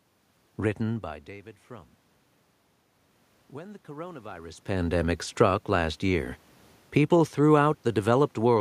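From 3.52 to 5.16 s there is automatic gain rising. The input level drops by about 18 dB, and the gain control slowly lifts its gain by about 4 dB across that span, so the voice and the room noise swell together before "struck last year people".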